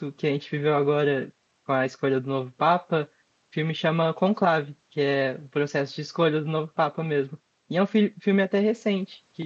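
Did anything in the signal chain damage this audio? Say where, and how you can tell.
No, nothing in the chain damaged this speech; the top end stops near 8 kHz, which fits an Opus call path doing its normal job.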